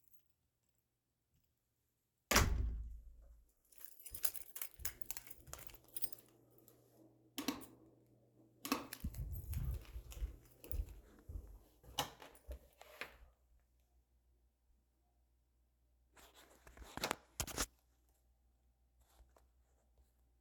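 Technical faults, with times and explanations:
No technical faults detected in the recording.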